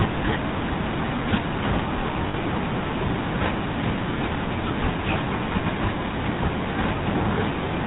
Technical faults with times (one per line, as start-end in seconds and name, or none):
0.00-7.86 GSM full-rate codec
2.28-2.35 lost GSM frames